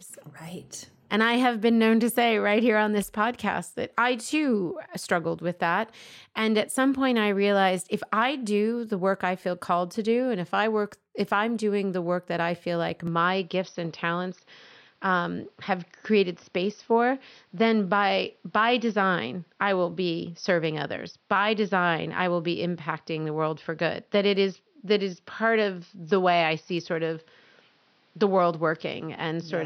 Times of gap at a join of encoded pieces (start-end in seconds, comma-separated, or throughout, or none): none